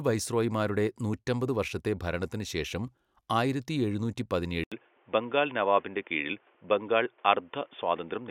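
At 4.64 s an 80 ms silence precedes speech that stays dull to the end, with nothing above 3.6 kHz and a faint new noise bed. The level barely changes. That gap plus changed background marks an input switched to a poorer device, likely, not mere filtering.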